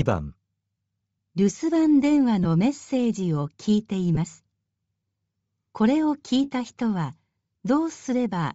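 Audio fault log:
throughout: Bluetooth LC3 compression. The speech carries a plainly audible breathy, grainy edge, with the upper range sounding hissy rather than detailed. This is likely LC3 coding at a low rate, consistent with 32 kbps in short 7.5 ms frames, where much of the top band is zeroed and replaced with filled-in noise.
2.44–2.46 s and 4.15–4.18 s: lost LE Audio frames. Each is a brief, 15 ms smear where the speech turns momentarily noisy and blurred before recovering. The gap fits two missing 7.5 ms frames, which the decoder covered by repeating the previous spectrum with randomised signs, producing noise-like filler instead of clean sound.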